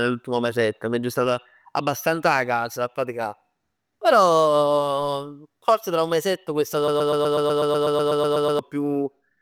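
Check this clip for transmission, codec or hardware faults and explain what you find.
One fault turns up in the speech.

A broken-record loop runs from 6.88 to 8.59 s, right after "tra un mesetto questa". A 0.12 s fragment repeats exactly, back to back, 14 times, a rapid mechanical stutter. Likely a stalled stream resending its last fragment, losing the audio due there.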